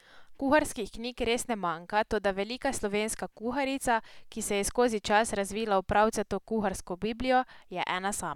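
No technical faults can be heard in this speech recording. Nothing breaks, drops out or disrupts the sound at any point.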